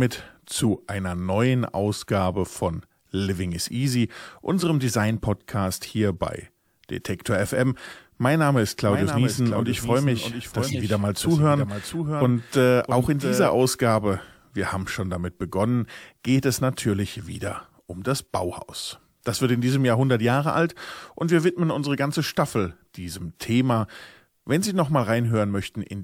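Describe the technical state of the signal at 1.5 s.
At 1.5 s the speech signal is intact, with no dropout, clipping, distortion or other fault to be heard.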